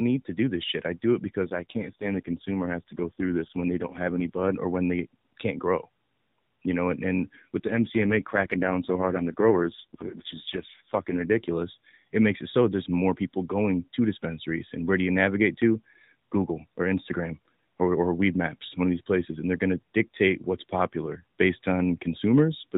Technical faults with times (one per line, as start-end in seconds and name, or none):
1.45-4.54 AMR rate drop
7.68-11.25 AMR rate drop